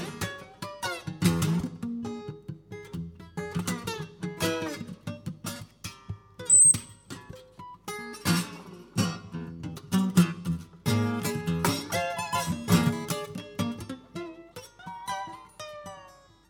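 No technical faults can be heard at any point in the audio.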